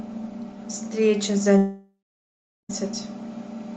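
From 1.57 to 2.71 s, a long network dropout likely halts delivery; concealment continues the last sound as a fading buzz, then 0.73 s of silence.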